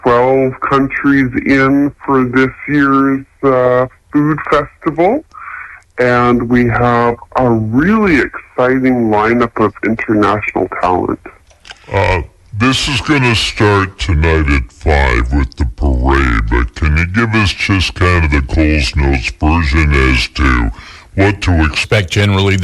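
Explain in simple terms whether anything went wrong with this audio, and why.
A wrong sample rate runs through most of the clip, from 0.0 s to 21.84 s. The sound was captured at one speed and played back slower, without adjusting for the difference, which fits a recording made at 44.1 kHz but played at 32 kHz. Everything runs at 0.726 times its proper speed, and pitch drops by about five and a half semitones, so the sound comes out lower, slower and heavier than it should.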